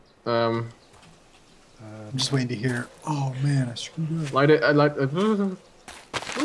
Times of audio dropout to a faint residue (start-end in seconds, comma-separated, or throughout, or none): none